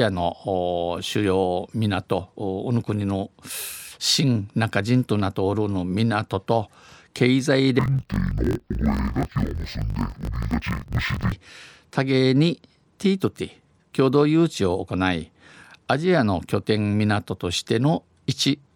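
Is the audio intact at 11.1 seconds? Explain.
No. Interleaved audio read as planar runs from 7.79 to 11.34 s. Each 21.8 ms block's alternating left-right samples are split into halves, so the speech drops an octave and sounds dull and robotic, buzzing at the 45.9 Hz block rate.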